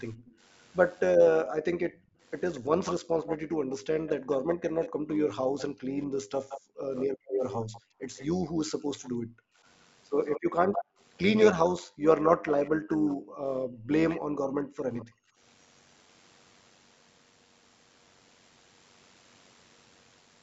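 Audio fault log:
throughout: overlap-add ripple. A metallic buzz of about 6 dB at around 100 Hz, from windowed frames overlapping without summing to a constant gain.
0.15–1.01 s, 1.95–9.1 s, 10.27–12.7 s, 14.09–15.05 s: echo leak. A delayed copy of the speech trails it. It comes 232 ms behind and very faint in the first stretch, then 170 ms behind at all the later ones. It is quiet around 14 s, noticeable from 2 to 9 s, and nearly as loud as the speech from 10 to 13 s. The likely cause is a far-end loudspeaker echo the canceller failed to remove.
1.41–9.65 s, 10.84–15.39 s: background gated by the echo canceller. The room sound dips sharply, by up to about 40 dB, for roughly four seconds and two seconds in total, as the canceller suppresses the microphone.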